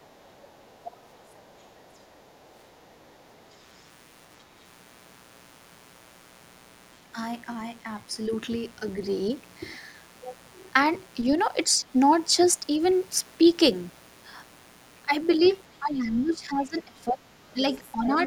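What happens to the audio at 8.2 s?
At 8.2 s you're hearing the mains buzz that runs through the entire clip. Switching spikes leak in twice every 60 Hz cycle, stacking harmonics up into the kilohertz range, so it's a steady, raspy buzz sitting roughly 30 dB under the speech.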